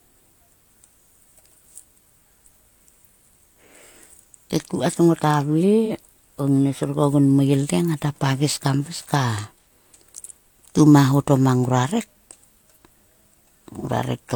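Brief smeared, phasey patches of roughly 43 ms appear at 5.85, 9.62 and 13.79 s. They come from AAC frame loss with concealment: each gap fits a single lost frame that the decoder filled in from the previous spectrum.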